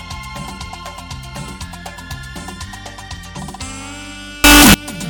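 Signed and unsigned mixed up, from 4.44 to 4.74 s: the audio abruptly turns into a blast of very loud, harsh distortion, with quiet moments as loud as the rest. The likely cause is 16-bit samples read with the wrong sign convention, flipping the top bit so every zero crossing jumps across the full range.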